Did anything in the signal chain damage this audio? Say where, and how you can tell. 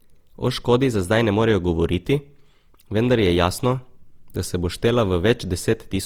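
Yes, at the codec stage. Throughout the speech there's a swirly, hollow smear and soft consonant attacks, more than Opus at 48 kbit/s alone would cause. That's likely generation loss from re-encoding about four times, each pass quantising on a shifted frame grid and stacking the damage.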